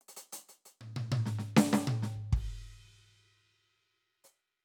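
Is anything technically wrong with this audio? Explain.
No, the music comes through with no audible technical faults in the signal.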